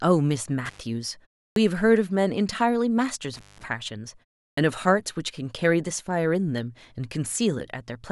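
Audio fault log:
0.65–0.80 s and 3.34–3.64 s, intermittent contact: the speech cuts out abruptly with crackle at both edges, then faint hiss fills the gap. A loose cable or plug briefly opens the line, for 104 ms the first time and 170 ms the second.
1.49–1.56 s and 4.50–4.57 s, clipped start after a pause: after silences of 0.31 s and 0.34 s, speech bursts in abruptly with its opening sound missing. The output device dozes in the pause and needs about 72 ms and 74 ms to wake, swallowing that much.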